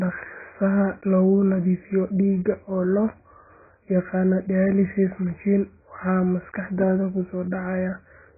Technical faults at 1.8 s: AAC compression

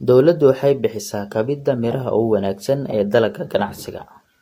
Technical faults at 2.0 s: transcoding between lossy codecs

